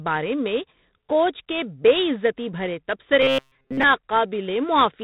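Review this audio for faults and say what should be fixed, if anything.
The whole clip carries G.726 ADPCM damage at 24 kbit/s: each sample is coded as a few bits of difference from a prediction, so a rasping hiss rides on the speech and tracks its loudness, and nothing passes above 4 kHz. A spectrogram shows a hard ceiling there and grainy noise filling the speech bands. Prevent it by using 32 kbit/s or a wideband codec on that link.

From 3.22 to 3.83 s, just after "کے بے عزتی بھرے", the speech turns into robotic sound from repeated short buffers, a rigid metallic buzz at 133 Hz. The likely cause is audio arriving too seldom, with roughly 7.5 ms segments replayed in place of most of the real signal. On the waveform this appears as identical repeating cycles, and a spectrogram shows evenly spaced harmonic stripes of 133 Hz. Prevent it with deeper jitter buffering and proper packet-loss concealment in place of simple repetition.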